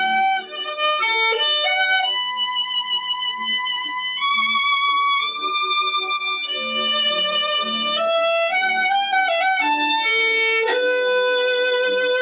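A noise suppressor applied to music or sounds runs through the whole clip. A processor designed for speech treats sustained tones, ambience and decaying tails as noise and keeps pulling them down, while onsets get through. The result is a gain that swings by about 5 dB, so held material pumps and thins, and tails collapse sooner than they should. The narrow band, with nothing above 4 kHz, points to a G.711 mu-law call path at 64 kbps.

Between 2.82 and 3.46 s there is a sound cut by the noise suppressor. Here the suppressor judges the audio as noise and attenuates it more heavily than its surroundings, with the deepest drop reaching about 8 dB. Roughly half a second of that span is affected. The sound sinks in level.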